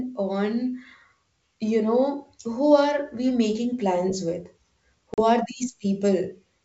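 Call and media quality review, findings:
Packet loss on an ADPCM call, 5.14 to 5.23 s: hard-edged silent hole, about 40 ms lost (a couple of packets). Unlike a clean dropout, the G.722 decoder's predictor and step size desynchronise, so speech resumes slightly distorted before settling.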